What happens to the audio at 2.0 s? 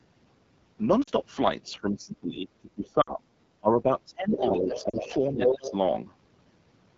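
Speech suppressed in double talk runs from 1.64 to 3.25 s, so 2.0 s falls inside it. The likely cause is an echo canceller that heard both ends talking at once. Unable to tell this talker apart from the loudspeaker echo, it turned the whole signal down. The speech dips, thins and breaks up in pieces, falling by about 25 dB at its deepest, with roughly a second and a half affected in all.

The AMR wideband (HD Voice) codec damage also continues through this moment, as it does across the whole clip. The speech sounds rough and raspy, which fits the 8.85 kbit/s mode, the second-lowest rate AMR-WB offers. At that rate the pulse-driven vocal tract model has too few bits to follow the voice cleanly. The band from 6.4 to 7 kHz is filled with shaped noise rather than real detail.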